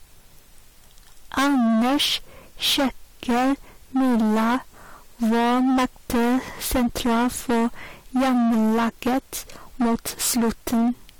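The clip is speech with hard clipping from start to end. The signal was driven about 20 dB past what one stage could pass, so roughly a third of the waveform is cut flat. Those flat tops add high harmonics, heard as fuzz on every loud sound.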